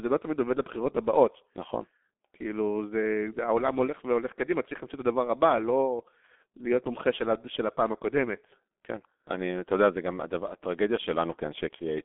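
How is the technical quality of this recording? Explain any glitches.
The recording is low quality throughout, with heavy coding damage from start to finish.

G.723.1 codec, throughout: the speech is squeezed into a 250 Hz to 3.5 kHz telephone band, with nothing above 3.7 kHz. The low bitrate, which fits about 6 kbit/s, and the 30 ms frames make consonants smear and the voice sound hoarse. Plain band-limiting would sound muffled but stay clean.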